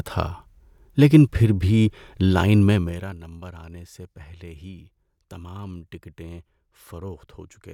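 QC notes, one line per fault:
2.69–3.19 s, zipper noise: a fine ticking buzz rides on the speech as the level falls by about 20 dB, because the gain drops in small unsmoothed steps, around 70 per second, each leaving a tiny click.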